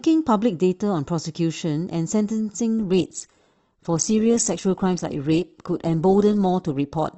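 At 2.78 s the speech abruptly drops in quality, with codec artefacts rising, and it stays that way to the end with no gap. This is an adaptive stream switching to a lower bitrate, consistent with a drop from about 64 to 16 kbit/s Opus after the connection slowed.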